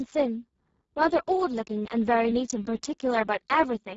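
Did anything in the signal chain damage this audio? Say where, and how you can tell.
Yes, the codec stage did it, and it's there for the whole clip. The speech has that hoarse, noisy CELP texture of a Speex codec squeezed hard, which fits a very low bitrate, somewhere around 6 kbps. At that rate there's barely anything left for the excitation, so the voicing turns to noise. Nothing comes through above about 7.7 kHz, and the top band sounds like shaped hiss rather than real detail.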